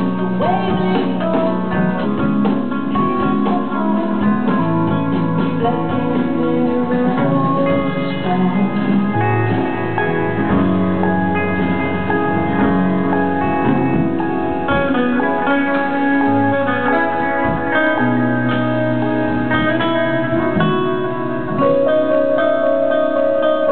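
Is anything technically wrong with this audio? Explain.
Yes, there is damaged data in a compressed stream from 2.00 to 2.06 s: corrupted frames threw the decoder out of sync, producing a brief chirp, squawk, click or short hole.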